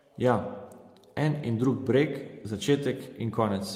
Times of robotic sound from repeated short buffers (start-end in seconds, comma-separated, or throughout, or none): none